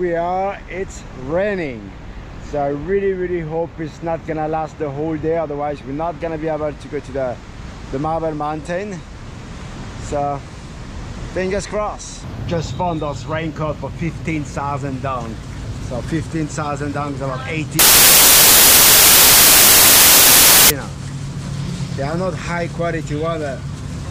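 Samples built from the wrong bytes, from 17.79 to 20.70 s: the bytes of each sample are misassembled, so the rapidly varying low-order bits land in the high-order position and dominate the value. The sound turns into loud, harsh broadband noise.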